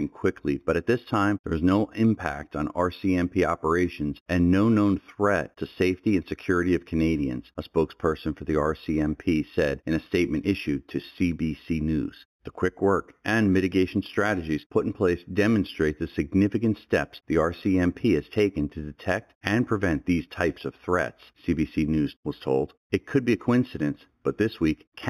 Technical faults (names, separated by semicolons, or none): imaging from linear upsampling